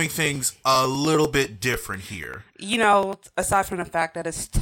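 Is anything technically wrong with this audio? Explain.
Yes, there's a steady run of periodic USB or driver dropouts through the speech, from about 0.06 s to 4.52 s. Every 99 ms or so, roughly ten times a second, something stalls the USB bus or the audio driver and a sliver of audio, around a millisecond, just gets skipped rather than padded with silence. That gives around fifty small, evenly spaced ticks that you only notice where there's signal underneath.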